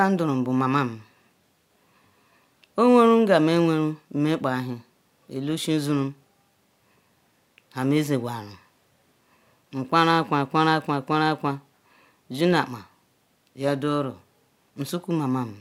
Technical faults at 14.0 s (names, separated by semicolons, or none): none